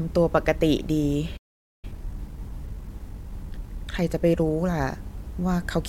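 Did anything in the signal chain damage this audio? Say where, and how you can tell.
Yes, damage occurred at the playback stage. A playback stall cuts the speech off in mid-flow at 1.37 s, and the output stays silent until 1.85 s, a gap of roughly 0.46 s. The break arrives with no natural pause around it, so it isn't part of the delivery. It was likely caused by the player's buffer running dry or its audio thread being blocked, which left nothing to send to the output until it recovered.

Once sound returns at 1.85 s, a time-compressed catch-up follows and lasts until 4.85 s. Having fallen behind during the stall, the player works off the backlog by removing short slices of audio and cross-fading across the joins, which runs the speech at 1.1 times normal speed. Because the pitch stays where it belongs, the speech comes across as slightly hurried instead of higher through those three seconds.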